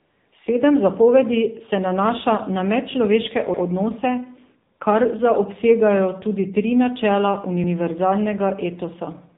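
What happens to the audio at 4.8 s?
At 4.78 s the real background drops out for a brief 20 ms and is replaced by a smooth, steady hiss. This is AMR comfort noise: the phone judged that moment as silence, sent no speech frame, and the receiver filled the gap with synthetic noise built from a rough description of the background's level and spectrum.

Around that moment, as throughout, the speech sounds plainly buzzy and synthetic, with nothing above 4 kHz. That is the AMR narrowband mobile codec, and the degree of damage fits AMR-NB running at about 7.4 kbps. It rebuilds the voice from a vocal-tract model driven by a few pulses per subframe.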